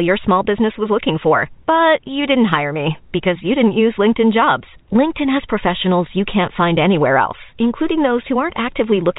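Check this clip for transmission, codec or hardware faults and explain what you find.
Nothing here points to a transmission, codec or hardware problem; the speech comes across as ordinary fixed-line telephone audio, with the G.711 telephone coding doing its usual job of keeping everything under 4 kHz.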